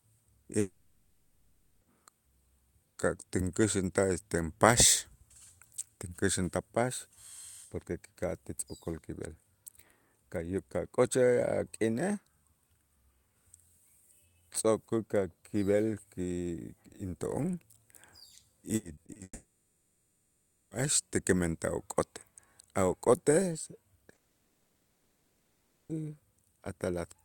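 From 0.59 to 1.83 s the speech cuts out, likely a long network dropout. The last sound trails on as a fading buzz before about half a second of silence. Speech resumes with that part missing.

From 18.75 to 19.21 s, repeated packet loss makes the speech choppy and robotic. Several short holes, none over 40 ms, are patched by stretching the last sound.

A second likely long network dropout follows at 19.23 to 20.73 s. The fill dies quickly into about 1.3 s of silence.

A third, likely another dropout, runs from 24.13 to 25.91 s. It is silent throughout, and speech then returns with that stretch lost.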